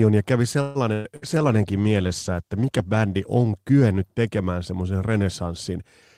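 Right after "ja kävi", from 0.61 to 0.78 s, a call audio freeze stretches the last sound into a fading buzz or hiss for about 136 ms, likely because delayed packets left the jitter buffer empty. Nothing is lost, but everything after it arrives later. On a spectrogram it shows as a smeared, horizontally held band that fades; the waveform flattens into a steady decaying texture.

A burst of packet loss follows at 0.93 to 1.07 s, still just after "ja kävi", with about 120 ms of audio missing. A second burst at 1.16 to 1.25 s drops about 60 ms. Each gap is filled by a held, fading continuation before the sound resumes further on. Both show as blurred, decaying patches ending in abrupt joins.

From 1.27 to 3.82 s, ending just before "tekemään semmoisen", a call bitrate drop takes the stream from 32 to 15 kbps. It stays at the lowest rate for about 1.7 s. The coarser coding sounds rough until the rate recovers.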